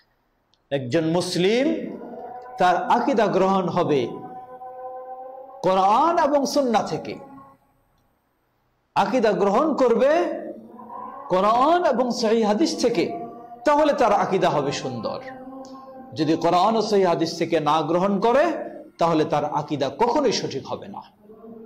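At 16.82 to 16.89 s a brief smeared, noisy or phasey patch interrupts the sound. This is AAC frame loss with concealment: a roughly 43 ms stretch, fitting a single lost frame, was rebuilt by the decoder from the last good spectrum rather than decoded.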